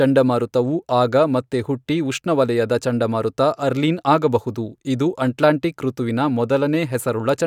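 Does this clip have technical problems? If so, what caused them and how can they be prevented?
No, there are no technical problems to report here.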